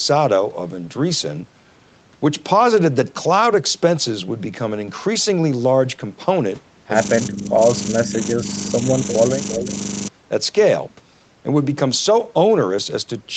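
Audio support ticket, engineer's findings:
System hang loop, 7.01 to 10.08 s: a 40 ms slice of speech repeats back to back, about 77 times, so it comes across as a steady buzz at 25 Hz rather than a stutter. The driver or host stalled while the device kept cycling the same ring buffer, which fits a 40 ms buffer. Worth checking the audio thread and driver for the freeze.

Speech suppressed in double talk: dips of about 10 dB at 7.29 to 7.60 s and 8.03 to 8.14 s, and shallower ones of about 5 dB at 8.35 to 8.46 s and 9.58 to 9.68 s. These are likely the echo canceller ducking both sides while the far end talks over the near end. Each dip lasts roughly 100 to 300 ms.

Echo leak: a faint delayed copy of the speech, about 10 dB below it and 351 ms late, shows up briefly at 9.08 to 9.14 s and again at 9.50 to 9.67 s. It's likely residual loudspeaker echo at the far end that its canceller didn't fully remove and sent back down the line. 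The second scrap overlaps the 9.58 s suppression dip.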